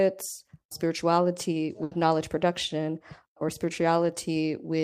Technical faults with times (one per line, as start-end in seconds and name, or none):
1.83-1.93 burst of packet loss